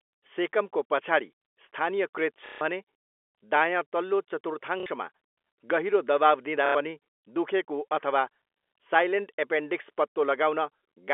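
A brief robotic stutter, buzzing at roughly 33 Hz, breaks the speech at 2.46 to 2.61 s, just after "सेकमको पछाडि स्थानीयकृत", then at 4.80 to 4.86 s, and at 6.66 to 6.75 s, just before "पनि दुखेको अथवा". This is packet loss with the last packet repeated. Gaps of 150, 60 and 90 ms were filled by looping the previous packet, which fits 30 ms packets, beneath a telephone band capped near 4 kHz.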